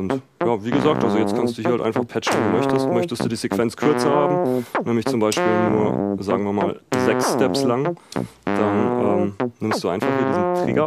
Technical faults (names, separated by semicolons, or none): loud pop